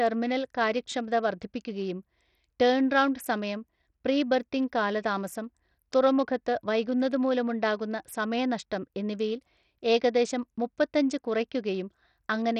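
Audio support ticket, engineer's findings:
Bluetooth SBC compression, throughout the speech. Symptom: treble thin and flickering in and out, gritty grain and aliasing riding on the voice. Component: likely the Bluetooth link's SBC encoder. Mechanism: starved bit allocation; top sub-bands get few or no bits, the rest coarsely quantised. Damage heavy, pointing to a low bitrate near 64 kbps.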